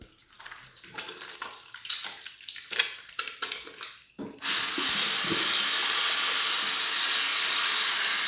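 No technical faults are audible.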